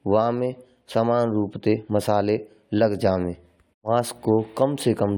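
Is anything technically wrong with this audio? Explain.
No, nothing technically wrong stood out on listening to this speech clip.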